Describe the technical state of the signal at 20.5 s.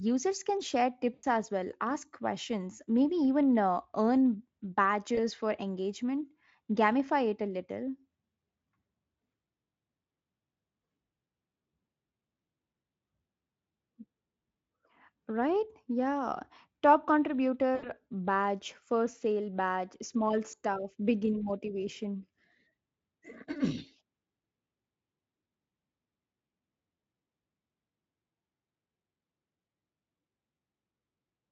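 VoIP packet loss concealed by the speech codec occurs between 20.51 and 20.54 s, after "first sale badge small" and before "begin motivation". About 20 ms of audio went missing, which fits a single lost frame. The decoder filled the gap by extending its last pitch and filter with falling gain, so the sound briefly smears into a buzzy tone or coloured noise that fades. The recovery frames stay weak or distorted before "begin motivation" comes back fully.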